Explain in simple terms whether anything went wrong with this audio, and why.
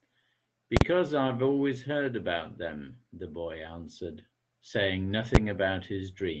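Two kinds of problem can be heard in this speech.

The first is invalid numbers at full scale, heard twice. A calculation broke down and produced impossible values, which the output treated as the loudest possible signal. From 0.77 to 0.81 s there is a sharp pop at each edge with silence between, which fits a 2048-sample block. At 5.35 s the stretch is much shorter, so it comes out as a single bang.

The second is a lost packet rebuilt from error correction, from 1.27 to 1.29 s. One 20 ms piece of the call audio went missing. The next piece carried a rough backup copy, so there is no gap, but that instant sounds grainier and noisier than the speech around it.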